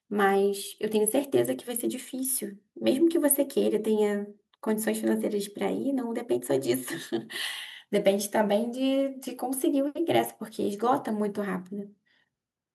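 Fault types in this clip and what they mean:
No technical faults are audible.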